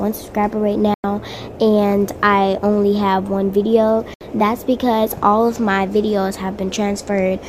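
At 0.94 s the sound snaps to silence and comes back at 1.04 s, and at 4.14 s it happens again until 4.21 s: two digital broadcast dropouts. The receiver muted after failed frames, with gaps of about 96 ms and 64 ms that fit three and two lost frames, and whatever was sent in them is gone. A fast 3 ms fade makes each cut abrupt. The waveform shows flat silent holes, and the spectrogram shows clean vertical blank bands.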